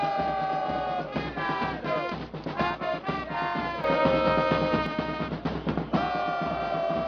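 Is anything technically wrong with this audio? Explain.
Yes, there is a sudden gain jump from 3.84 s to 4.86 s. At 3.84 s the level rises abruptly by about 6 dB and stays there until it falls back at 4.86 s. The likely cause is a digital gain setting applied instantly rather than faded in, so the step lands between one sample and the next. The sound and its background noise get louder together, which marks it as a gain change rather than a change in the source.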